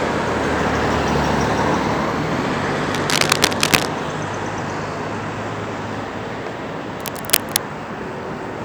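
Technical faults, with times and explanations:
2.92–3.88 s and 7.00–7.57 s, cable scratch noise: dense, uneven scratching bursts, first louder than the sound, then about equal, likely from a worn connector's contact resistance fluctuating.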